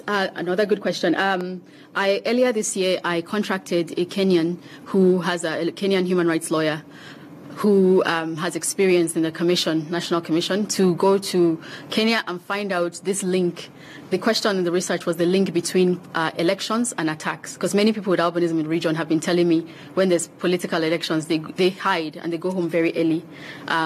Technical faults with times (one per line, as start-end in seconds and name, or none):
none